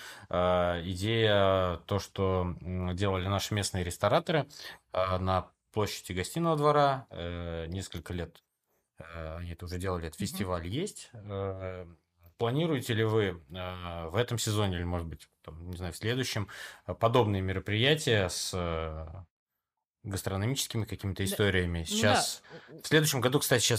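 Nothing wrong turns up anywhere in this speech recording, so there's no fault to point to at any moment.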